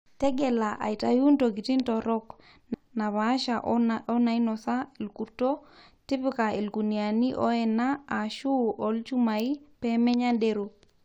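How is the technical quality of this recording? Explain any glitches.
The recording has one glitch.

At 2.73 s the speech jumps abruptly forward, with a brief blip at the join. The sound before and after does not connect. The talk resumes from a later point rather than continuing smoothly. The likely cause is a stream segment skipped. The audio was delivered as a series of short chunks. One chunk seems to have failed to load, so the player dropped it and carried on with the next. That stretch of speech is simply missing.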